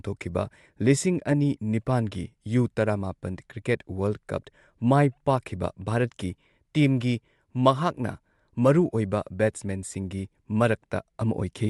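From start to finish, the speech has a breathy, grainy edge on its upper frequencies, where fine detail is replaced by hiss-like fill. This is likely Bluetooth LC3 compression. Its short transform frames discard upper spectrum and substitute noise, consistent with 7.5 ms frames near 48 kbps.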